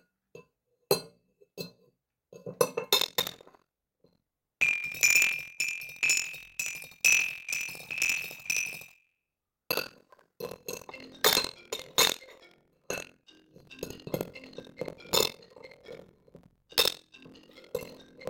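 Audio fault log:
2.97–18.3 s, buffer tearing: the writer and reader of the ring buffer have slipped and cross every period, so about a third of each buffer replays audio from roughly 70 ms earlier. The hard joins produce a steady 43.1 Hz rattle, which fits a 1024-sample buffer, heard whenever sound is present.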